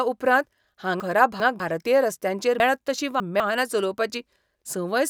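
From 1.0 to 1.6 s the speech jumbles briefly as chunks arrive out of order. A 200 ms chunk plays two chunks late. No audio is missing, unlike a dropout. Sound is just reordered with hard joins. Again at 2.6 to 3.4 s, a 200 ms chunk lands three chunks late, scrambling the passage with three hard joins.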